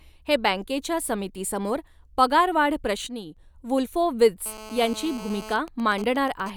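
At 3.07 s the speech level drops abruptly by about 8 dB. The background noise falls with it, so the whole signal steps down at once. There is no fade. The change most likely comes from a digital gain setting applied from one sample to the next, with no ramp to smooth it. At 3.37 s the level snaps back up. This sudden gain jump lasts about 0.3 s.

From 4.46 s to 5.53 s a hard, raspy buzz sits under the speech. This is GSM phone buzz. A 2G phone nearby, in an active call, transmits in bursts about 217 times a second. The audio circuitry rectifies those radio pulses into sound. The result is a 217 Hz tone rich in harmonics. It ignores the speech entirely. It stays steady throughout, at about 16 dB below the signal.

At 5.53 s the steady buzz gives way to GSM signalling bursts, which run to 6.5 s. The phone is still in the call, but its user has stopped talking. It now transmits only short groups of bursts at the same 217 Hz rate. 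After rectification these come through as even ticks with a longer buzz twice a second. They sit roughly 15 dB below the signal.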